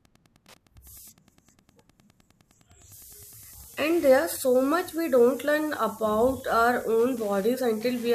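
A speech recording runs with a faint, steady ticking about ten times a second from start to finish, well below the speech. This is Wi-Fi interference: a nearby radio's beacon, sent every 102.4 ms, is picked up and rectified by the audio circuitry.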